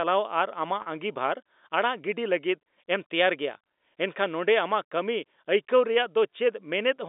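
At 0.82 to 0.86 s, packet loss with pitch repetition: about 40 ms of audio dropped out, and the receiver looped the last pitch period, giving a briefly held, buzzy tone over the telephone-band sound.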